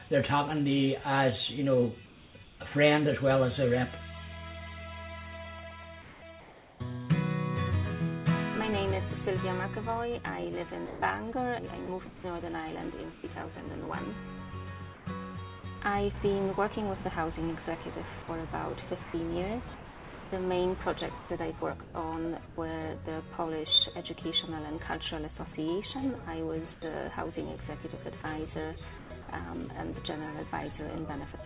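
At 2.06 to 2.6 s and again at 6.02 to 6.8 s, the sender likely switched to discontinuous transmission and the receiver generated comfort noise in place of the background. The real ambience drops out for about 440 ms and 600 ms respectively, replaced by a smooth, even hiss that has none of the original texture. The hiss may sit lower in level before the genuine background resumes. Both fills stay inside the narrow band of the call path, whose bandwidth suggests G.711 A-law with nothing above 4 kHz.

From 10.86 to 15.64 s, 18.22 to 22.58 s and 26.74 to 29.28 s, the sound is chopped by the voice detector, which likely toggled repeatedly between sending and muting. Each time it muted, quiet passages and the edges of sounds were cut away and filled with synthetic noise, totalling about 640 ms, 1.12 s and 280 ms in the three stretches. The result is a stuttering, broken-up texture.

At 31.32 to 31.34 s, right at the end, the sound is dropped by the voice detector, which likely classed a faint tail as background and stopped sending. 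About 20 ms of sound is lost, and flat comfort noise takes its place.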